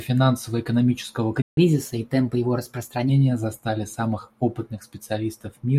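At 1.42 s the speech cuts to silence for about 152 ms until 1.57 s: a playback stall, likely from the player running out of data. From 1.57 to 3.09 s the speech runs 1.1 times fast and sits about a semitone and a half higher, as catch-up at higher speed resamples the backlog to regain lost time.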